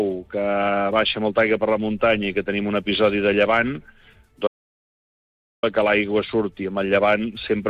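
An audio dropout to silence runs from 4.47 to 5.63 s: about 1.16 s of silence, likely from a lost input while recording continued, with no room tone.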